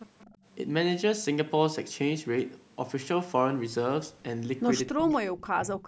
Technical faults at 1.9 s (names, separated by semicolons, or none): none